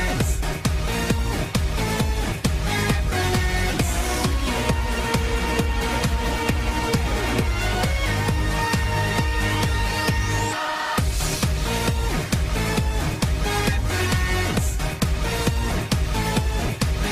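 No technical faults can be heard anywhere in this audio.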